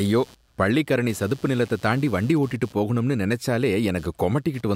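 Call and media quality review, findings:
Computer activity noise, throughout: buzz pulsing near 150 Hz, about 30 dB under speech; computer load disturbing shared ground; spectrogram shows harmonic comb unrelated to speech.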